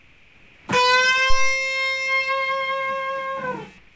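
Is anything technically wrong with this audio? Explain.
Yes, two things stand out.

From the start to 0.68 s, and again from 3.78 s to the end, the background sounds like comfort noise in place of the real room sound. It's likely a call path whose sender stopped transmitting during quiet stretches, with the receiver filling the gap with synthetic noise. You hear a flat, featureless hiss, about 5 dB quieter than the real background, which itself sits roughly 31 to 33 dB below the loud parts.

At 1.30 s there's a phantom power thump: a supply switching on a live input sends a voltage step through the coupling capacitors, and it comes out as a deep low thud. This one dies away quickly, with a decay of about 63 ms, but the disturbance lingers until about 1.58 s. The call codec cuts everything above 8 kHz, which fits G.722 at 64 kbps.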